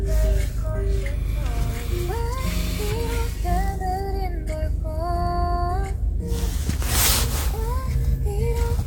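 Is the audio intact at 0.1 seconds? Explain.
Yes, at 0.1 seconds the audio is intact, with nothing interrupting or distorting the sound at that moment.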